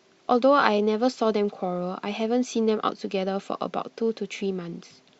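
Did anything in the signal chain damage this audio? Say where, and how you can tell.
No, nothing in the signal chain has damaged this speech recording. I can't hear a mark left by any stage, from the wiring through to playback.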